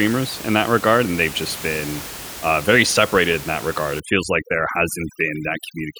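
Overdone noise removal runs from 4.0 s to the end at 6.0 s, just after "separated in that regard". The noise reducer clamps bands near its noise estimate too hard, so the room noise, about 14 dB below the speech, drops and breaks up into twinkling specks while quieter parts of the voice vanish.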